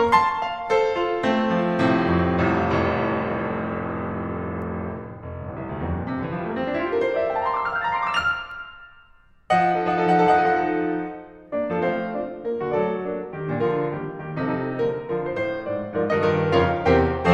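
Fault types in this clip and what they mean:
Nothing stood out on listening to this music; it gave no reason to single out any part of it.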